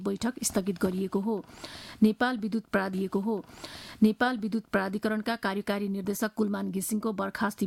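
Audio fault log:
2.93 to 4.93 s, stream segment repeated: right around 2.93 s there's a small blip, and then the two seconds you just heard play over again before things move on. That's the player grabbing or queuing the same chunk of the stream twice, so a 2-second stretch gets doubled and the clip runs 2 s longer than it should. The blip is just the seam where playback jumps back to the start of the duplicated segment.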